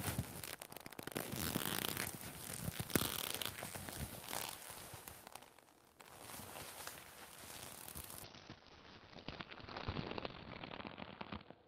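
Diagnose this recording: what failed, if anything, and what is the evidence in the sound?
From 8.24 s to the end of the recording the sound turns rough and watery, and its top end closes in to about 6 kHz where it had reached 20 kHz. It stays at its coarsest for about 2.6 s. This is a call bitrate drop at the network and codec stage. The bandwidth estimate fell, so the encoder was allowed far fewer bits, which fits a fall from around 32 kbps to about 7 kbps. Coding became coarser and the codec narrowed the audio band.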